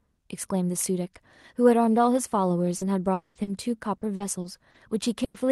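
Repeated packet loss (robotic sound) runs from 2.77 to 5.36 s. Audio packets kept going missing in seven separate gaps, the longest 100 ms, covering about 14% of that stretch. Each hole is patched by extending the preceding sound, giving choppy speech with fragments lost.

A long network dropout, from 3.13 to 3.38 s, is the likely cause of the quarter-second stretch where the speech smears into a continued tone that fades, briefly dips to near-silence, then resumes with the intervening sound gone.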